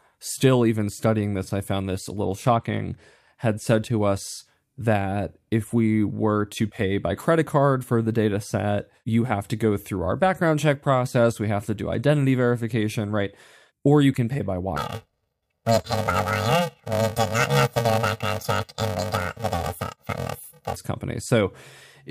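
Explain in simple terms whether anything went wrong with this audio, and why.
From 14.76 to 20.76 s the speech turns into a robotic buzz at about 345 Hz. That is planar audio read as interleaved. Left-then-right blocks of about 2.9 ms, fitting 128-sample blocks, get shuffled. The blocks are short, so there is no octave jump.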